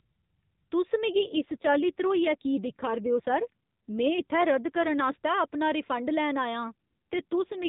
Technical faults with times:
1.10-5.03 AMR rate drop
6.72-7.68 AMR rate drop

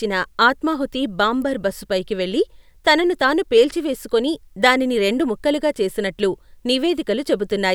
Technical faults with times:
1.42 electrical switching spike

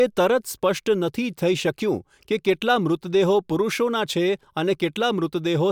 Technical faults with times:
none

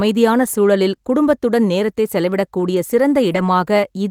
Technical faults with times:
3.31-3.37 lost packet rebuilt from error correction

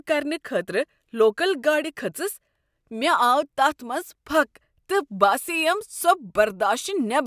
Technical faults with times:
none

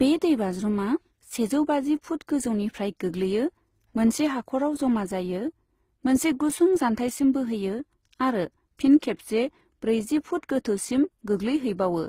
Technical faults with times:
0.00-12.09 transcoding between lossy codecs

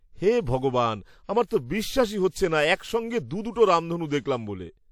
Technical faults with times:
1.46-1.51 pre-echo

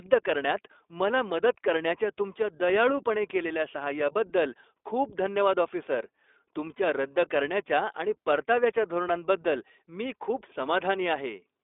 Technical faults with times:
0.00-11.63 iLBC codec

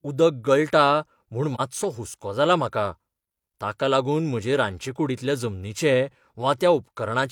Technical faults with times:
1.54-1.60 AAC frame loss with muting

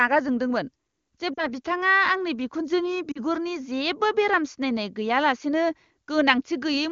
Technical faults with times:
1.34-1.49 lost AMR speech frames
3.12-3.20 lost AMR speech frames

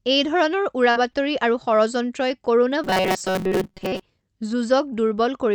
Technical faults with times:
0.91-1.29 short concealed packet loss
0.96-1.04 lost packet rebuilt from error correction
1.39-1.67 lost packet rebuilt from error correction
2.84-4.01 robotic sound from repeated short buffers

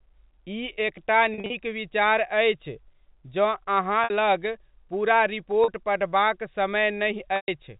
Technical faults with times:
1.34-1.50 packet loss with pitch repetition
4.04-4.10 packet loss with pitch repetition
5.64-5.68 packet loss with pitch repetition
7.36-7.48 packet loss with pitch repetition

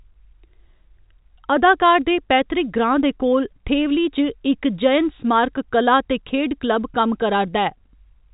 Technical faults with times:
none

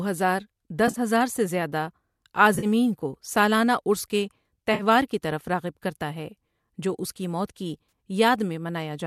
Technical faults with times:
0.88-0.99 AAC frame loss with concealment
2.54-2.66 AAC frame loss with concealment
4.74-4.83 AAC frame loss with concealment
7.88-7.92 AAC frame loss with concealment

